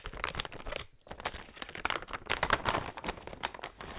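A recording of everyday sound, band-limited to 4 kHz through the call codec, with a skip ahead at 0.35 s: roughly half a second is dropped with no fill, and the waveform shows an abrupt seam where the spectrogram pattern changes without any gap.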